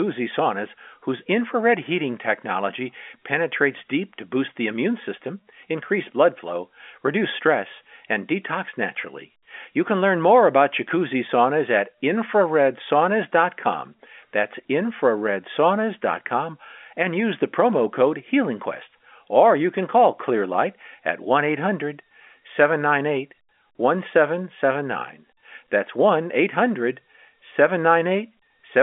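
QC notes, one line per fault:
No faults can be heard: the speech sits within a telephone band of about 250 Hz to 3.4 kHz, with nothing above about 3.6 kHz, consistent with an ordinary G.711 A-law line, which would run at 64 kbps.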